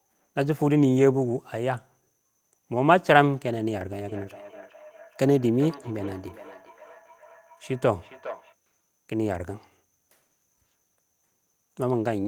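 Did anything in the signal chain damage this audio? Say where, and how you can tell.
Yes. The damage is in call processing: feedback echo between two devices, from 4.08 to 8.56 s. The speech returns at a steady interval of roughly 0.4 s, peaking about 20 dB below the direct speech. A second device is replaying this microphone's signal, and local echo cancellation cannot remove it.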